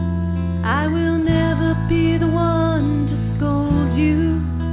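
No technical faults are audible.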